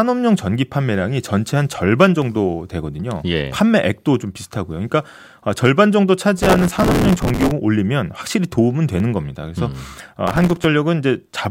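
Between 1.95 and 2.36 s the speech carries CD scratch ticks: four short clicks spaced evenly, about seven a second, each lasting a couple of milliseconds at most. This points to a blemish on the disc passing the pickup once per revolution and corrupting more data than error correction can restore. The player conceals each damaged patch by interpolating or muting, and each concealment is heard as a tick.

From 6.38 to 7.52 s a processor overload crackle rides on the speech as a continuous gritty tearing. The processor fell behind and missed buffer deadlines again and again, about 150 times. The spacing of the defects fits buffers of only a few milliseconds. Each missed buffer was filled with a repeat of stale audio, and the hard joins at every splice add up to the crackle. The crackle stops when the load eases.

A second set of CD scratch ticks falls between 8.73 and 9.14 s. Again there are four evenly spaced clicks, the longest about a millisecond, from the same once-per-turn concealment.

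The processor overload crackle returns from 10.27 to 10.65 s. It has the same stale-audio tearing, but the burst is shorter.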